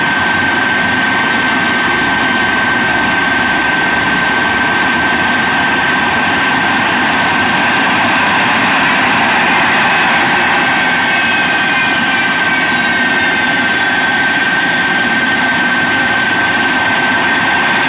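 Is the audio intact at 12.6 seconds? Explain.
Yes, at 12.6 seconds the audio plays through intact, with no dropout, click, distortion or other fault at that moment.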